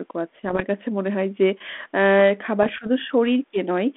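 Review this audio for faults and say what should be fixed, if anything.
Two rough patches stand out, from 0.45 to 0.63 s and again from 2.63 to 2.87 s. They're bit errors on an ADPCM link, at a rate well under one percent. Each flipped bit throws off the decoder's step size and predictor, so you get pops and gritty bursts with little jumps in level before it settles. The telephone band of about 250 Hz to 3.5 kHz around them fits G.726 at 32 kbit/s. To prevent this, tighten up the radio link and add error concealment on that path.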